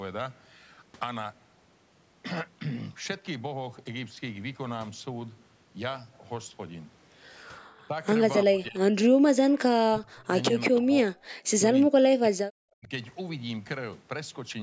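From 7.77 s the speech repeatedly dips and fragments, with the level falling by about 20 dB at 7.77–7.93, 8.46–8.79 and 10.68–10.92 s, and by about 40 dB at 9.92–10.3, 11.59–12.45 and 12.7–12.91 s. This is likely speech suppressed in double talk: with both ends talking at once, the echo canceller could not tell this talker from the loudspeaker echo and attenuated both. The longest dropout, in the 11.59–12.45 s stretch, lasts roughly 0.7 s.

At 11.21–11.29 s, between those dropouts, the room sound falls by about 13 dB for roughly 70 ms and then returns. This is background gated by the echo canceller, which clamped the microphone down while the loudspeaker was playing and then released it.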